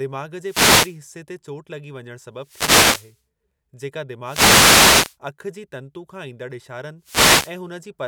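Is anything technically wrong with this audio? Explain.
Yes. Four wireless microphone noise hits break through this speech as short swishes of static: 0.41 to 1.00 s (ending just before "ते चोटु लॻी वञणु"), 2.38 to 3.21 s (right after "ते चोटु लॻी वञणु"), 4.23 to 5.17 s (ending just before "अखि जी तंतु खां"), and 7.01 to 7.58 s. Each burst comes from the analogue FM radio link fading as reflected signals cancel, so receiver noise rises over the voice.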